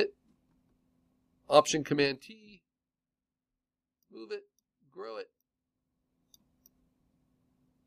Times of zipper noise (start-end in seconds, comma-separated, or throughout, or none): 1.92-2.36